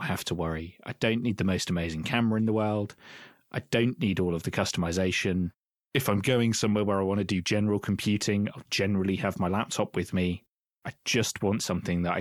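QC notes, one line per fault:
6.00–6.73 s, drift correction step: clock-sync software likely slowed playback 5.2% in one step, so speech drops about 93 cents flat after "all of the customization", then snaps back.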